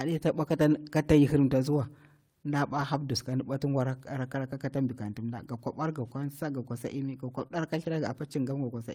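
Lost packets were rebuilt from error correction, with the decoder playing low-bitrate copies carried in the next packets, so there is no gap but the audio turns briefly rough and noisy. This happens at 0.43 to 0.49 s, between "ta bwa" and "kata yahirimtaziwa nda", which fits a pair of lost packets; at 2.69 to 2.83 s, a longer stretch; and at 7.39 to 7.45 s, just after "ga kwasa imi ga". A short concealed packet loss follows at 7.47 to 7.52 s. About 20 ms arrived too late and was filled by extending the preceding sound, giving a brief smear before another error-corrected rebuild at 7.52 to 7.58 s.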